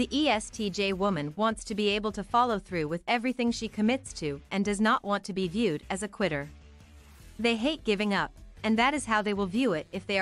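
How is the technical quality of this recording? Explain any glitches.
No technical faults or glitches can be heard anywhere in the recording; the signal stays stable and intact throughout.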